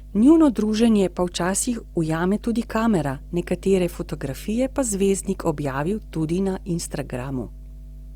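A ground loop or nearby transformer is coupling the power line into the signal, producing mains hum at 50 Hz for the whole clip. It sits as a steady low drone with some low harmonics, roughly 15 dB below the speech.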